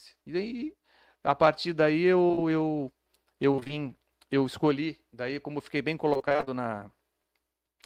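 Short concealed packet loss hits this speech clip three times in a row, at 2.27, 2.31 and 2.35 s, just after "daí a partir daí". Each time about 20 ms of audio never arrived, and the receiver extended the preceding sound before blending back, leaving a brief smeared wobble across 2.27–2.39 s. Repeated packet loss (robotic sound) follows at 3.51–3.71 s and again at 6.13–6.50 s, right after "como eu fiquei bem". Gaps of up to 22 and 25 ms keep recurring, so about half of each stretch is patched guesswork, giving a choppy texture with pieces of sound missing.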